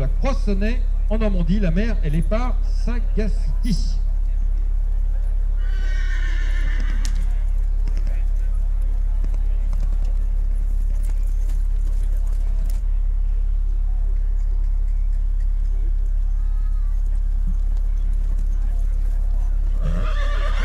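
Nothing here stands out as a fault; the sound just carries on steadily all the way along without anything going wrong.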